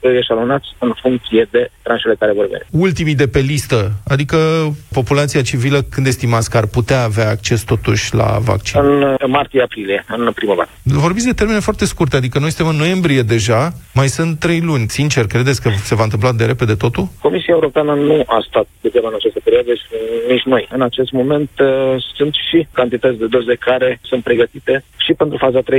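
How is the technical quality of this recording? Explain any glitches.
No glitches or technical faults can be heard here.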